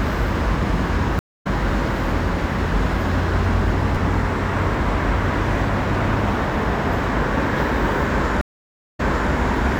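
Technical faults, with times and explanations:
1.19–1.47 s and 8.41–9.31 s, stream reconnect: The connection dropped and a fresh decoder started mid-stream. At 1.19 s there are 248 ms of silence, then the sound resumes about a fifth of a second later than where it stopped. At 8.41 s, 561 ms of silence is followed by a resend that replays 340 ms of earlier audio. A waveform shows a flat gap, then a brief muted or fading onset. A spectrogram shows a blank vertical band and a hard content jump.
3.95–3.97 s and 4.83–4.87 s, chunks out of order: An 11.61 ms chunk, which fits 512-sample blocks at 44.1 kHz, played late. It was one chunk late at 3.95 s and two chunks late at 4.83 s. Nothing is missing, but each misplaced chunk creates three hard joins, heard as a brief jumbled stutter. The waveform shows abrupt discontinuities at the splice points. The spectrogram shows thin broadband vertical lines where the joins fall.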